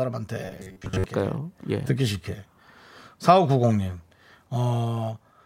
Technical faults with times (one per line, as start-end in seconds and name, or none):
0.45-1.04 robotic sound from repeated short buffers